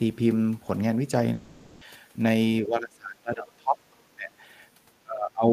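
At 1.33 s the speech breaks off for half a second, to 1.83 s. It's a long network dropout, most likely packets not arriving. The receiver papers over the whole gap with a fading buzzy continuation of the last sound rather than going silent, and the speech picks up again with that stretch simply missing.

From 2.62 to 3.82 s the voice sinks by up to about 25 dB. That's speech suppressed in double talk. Likely both ends were talking at once, so the echo canceller couldn't tell the talker from the loudspeaker echo and clamped down on everything.

Right after, between 3.93 and 4.03 s, there's a faint scrap of the other side's voice leaking through, sitting around 40 dB below the speech. It's tiny, likely echo from the talker's loudspeaker that the canceller didn't fully remove from the mic.

The same double-talk ducking comes back from 4.10 to 4.31 s and again from 5.03 s through to the end at 5.52 s. 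Each time the voice drops by about 25 dB while the far side is presumably talking over it.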